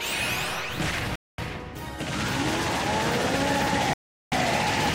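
Playback drops to full silence twice, from 1.16 to 1.38 s (about 0.23 s) and from 3.93 to 4.32 s (about 0.39 s), then resumes. These gaps are likely Bluetooth stalls, where interference delayed packets and the receiver's buffer emptied before retransmissions arrived.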